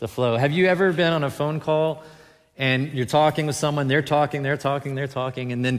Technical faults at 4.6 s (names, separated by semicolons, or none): none